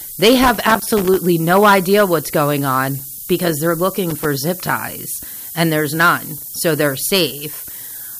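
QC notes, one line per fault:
Throughout, low bit depth with noise shaping: a steady, thin hiss sits under the speech at every moment, tilted hard toward the top of the band, and it stays high, only around 10 dB below the speech. The signal is being carried on very few levels, which fits a 5-bit word length. The rounding error that coarse steps create is fed back and pushed upward in frequency, so the noise collects as bright treble hiss instead of a flat rush.
0.43 to 1.19 s and 4.10 to 4.25 s, loose connector crackle: two irregular bursts of scratchy crackling break into the speech, the first lasting about three quarters of a second and the second a short flick of about 150 ms. Contact in the signal path is making and breaking in rapid succession. Each break chops the audio, and the uneven timing of those contacts gives the ragged, scratching texture.
5.36 to 5.44 s, chunks out of order: a brief jumbled moment. 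An 80 ms stretch is built from two 40 ms pieces, and the first piece arrived one chunk late, so it plays after the piece that should follow it. No audio is missing, but the order is swapped. The sound jumps at three hard joins, so the passage reads as a garbled stumble.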